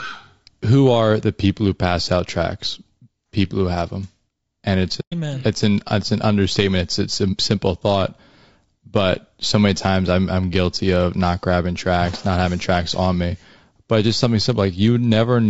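Low-delay AAC compression runs through the whole speech clip, likely from AAC-ELD at around 32 kbps. Its short frames resolve voice harmonics poorly, so the sound is plainly rough and grainy, with noise filling the gaps between harmonics and a thin, synthetic-sounding top band.

AAC frame loss with muting occurs from 5.00 to 5.14 s. About 120 ms of audio is missing, which fits several consecutive lost frames. The decoder zeroed their spectrum and the overlapping windows fade the sound out and back in, leaving a soft-edged hole.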